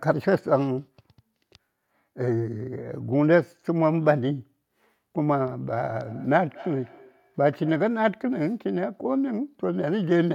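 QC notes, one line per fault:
6.05–8.0 s, feedback echo between two devices: the speech comes back roughly every fifth of a second, about 21 dB down, as another device's playback re-enters this microphone.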